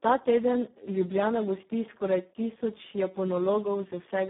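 Throughout, the speech sounds hoarse, buzzy and partly robotic, with a gritty noise riding on every syllable, and the sound is confined to a narrow telephone-like band of roughly 150 Hz to 3.6 kHz with nothing above 3.8 kHz. These are the marks of heavy Speex codec damage. Its CELP coder has too few bits to model the excitation, which fits a very low setting around 4 kbps, so it approaches vocoder-like synthesis.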